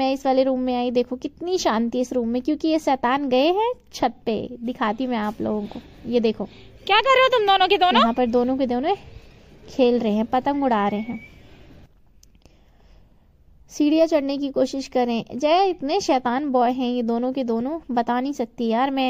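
No technical faults can be heard anywhere in the audio.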